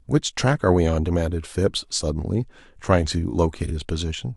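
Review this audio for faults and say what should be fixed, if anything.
There's one fault in this speech clip, a case of frames out of order between about 3.66 and 3.71 s. Two neighbouring chunks got decoded in swapped order, so that tiny stretch plays with its halves swapped. You hear a short garbled flutter. The size fits a single frame of about 23 ms on each side trading places. Nothing goes missing, so the timing stays intact. To prevent it, make sure the receiver reorders packets by sequence number or timestamp in its jitter buffer before handing frames to the decoder.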